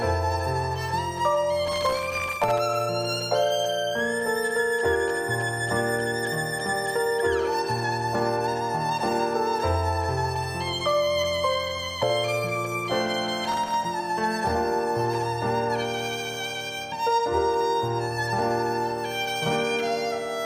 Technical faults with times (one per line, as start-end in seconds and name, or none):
1.68-2.59 processor overload crackle
13.44-13.74 processor overload crackle